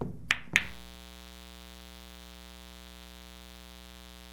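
From 0.60 s to the end, a mains buzz sits under the sound at about 15 dB below it. Sharp switching spikes, twice per 60 Hz cycle, leak in through a dimmer, rectifier or poor shielding, spreading harmonics into the kilohertz range and giving a steady, raspy edge.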